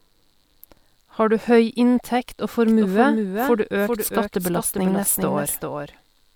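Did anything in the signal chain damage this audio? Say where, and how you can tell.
Yes. From 2.67 s, right after "du høy inntekt og", a doubled audio track appears and runs to the end: a full-band second copy of the speech trails the original by around 400 ms, roughly 5 dB quieter. It switches on abruptly and has no decay or room colouring, which separates it from acoustic echo or reverb. The cause is likely a second, slower capture path mixed in at the routing or recording stage.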